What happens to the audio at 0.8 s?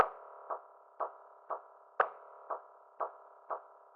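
Adaptive stream at a lower bitrate from 0.81 s to the end: codec artefacts abruptly rise without a gap, which fits a switch from AAC-LC at 96 kbit/s to HE-AAC at 20 kbit/s.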